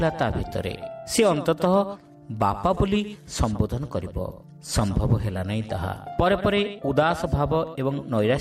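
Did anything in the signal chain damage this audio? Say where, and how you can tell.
No, nothing in the signal chain damaged this audio. No stage, from the wiring and converter through to storage and playback, leaves any audible trace of trouble.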